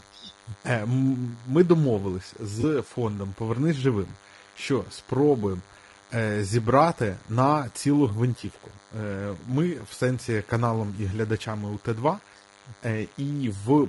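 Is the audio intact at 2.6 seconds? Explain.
No. From 2.61 to 2.64 s there is AAC frame loss with concealment. About 20 ms of audio, consistent with a single lost frame, was rebuilt from the preceding spectrum. It sounds like a brief smeared, noisy patch, and on a spectrogram it appears as a thin vertical strip of blurred harmonics.

A DECT cordless phone buzz also runs through this moment. Radio bursts repeating at 100 Hz get rectified into a thin buzz about 30 dB below the sound. On a spectrogram it shows as evenly stacked horizontal lines at multiples of 100 Hz.

The speech is also plainly rough and grainy, likely from low-delay AAC compression such as AAC-ELD at a low bitrate. On a spectrogram you would see noise filling between the harmonics and a smoothed, synthetic-looking top band.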